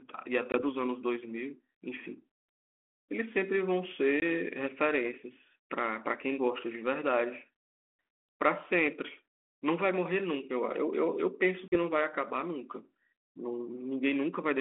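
A speech clip over a narrowband G.726 ADPCM line (roughly 250 Hz to 3.4 kHz, in keeping with 32 kbit/s) has three dropouts from packet loss on an ADPCM call, at 0.52–0.62 s, 4.20–4.23 s and 11.68–11.77 s. Each has a hard-edged gap of 20, 20 and 40 ms, about a packet or two, after which the decoder's predictor and step size have drifted from the sender's, so the speech comes back with brief distortion before resettling.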